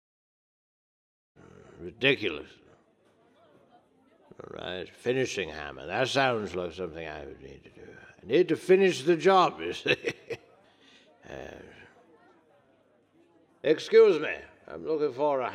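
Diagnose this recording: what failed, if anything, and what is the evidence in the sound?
Nothing here points to a failure at any stage; the level just eases up in a smooth, deliberate fade-in over roughly the first second and a half, with no click or hard edge, and that's simply how the recording begins.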